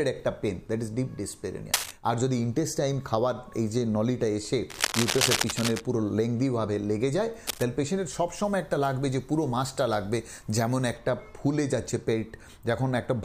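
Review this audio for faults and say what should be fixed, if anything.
Scratchy, rustling bursts cut across the sound at 1.74–1.91 s, 4.70–5.82 s and 7.47–7.63 s, the first two about as loud as the sound itself, the last a little quieter. This is cable scratch noise, likely a worn lead or connector whose contact resistance flickered as it moved.

From 8.44 to 10.97 s the sound turns thin, glassy and hissy, with sibilance pushed forward. This is pre-emphasis left on: treble boosted by the 50/15 µs CD curve was never cut back, leaving 10 kHz about 8 dB hotter relative to 1 kHz.

Replace or clean suspect cables and connectors, and make sure de-emphasis is applied wherever the emphasis flag is set.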